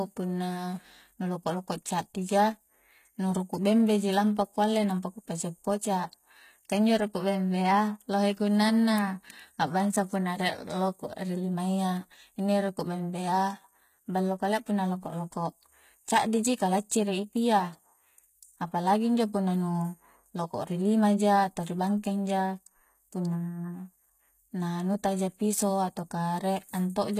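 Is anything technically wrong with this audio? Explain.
Yes. Throughout, the speech likely went through HE-AAC compression at a very low bitrate, perhaps about 20 kbps. Replicated treble up to 14.9 kHz makes s sounds gritty and metallic.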